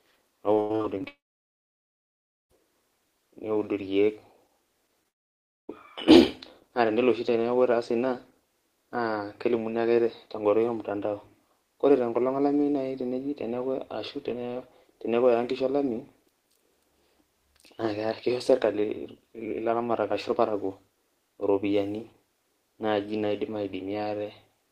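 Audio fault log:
0.53 to 1.06 s, repeated packet loss (robotic sound): seven separate holes open up in about half a second, the longest about 95 ms, and together they take away roughly half of that stretch. Each hole is bridged by stretching the sound that came just before it, and real audio returns only briefly before the next hole, so the speech comes out choppy and mechanical. What sets this apart from a single dropout is the rapid alternation of real and patched fragments, never one continuous gap.
1.08 to 2.51 s, long network dropout: about 1.4 s of audio is gone, and almost all of that time is silent. The receiver repeats the last sound for a moment as it decays, then gives up, and speech resumes only at about 2.51 s with the missing part never played. This follows straight on from the choppy run before it, which points to the network link failing entirely, likely a total interruption in delivery rather than scattered late packets.
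5.03 s, short concealed packet loss: about 20 ms of audio fails to arrive in time, and the receiver covers roughly 11 ms of that by extending the preceding sound before it blends back into the real signal. It is heard as a tiny smear or wobble. Because it is one isolated, very brief hole that recovers at once, it differs from the rapid chain of gaps at the start.
5.08 to 5.70 s, long network dropout: immediately after that smear, about 0.6 s is lost and nearly all of it is silent. There is only a momentary decaying continuation of the last sound before the silence, and then speech resumes with that segment missing. Being much longer than the 20 ms hole just before it, with silence rather than a smoothed-over blend, it points to delivery stopping altogether, likely a brief outage on the link.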